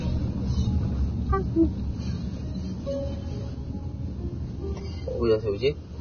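Throughout the 6-second clip, the sounds carry swirly, smeared artefacts that a high-bitrate MP3 would not produce, likely low-bitrate audio saved at a high bitrate, pointing to an earlier encode near 18 kbit/s.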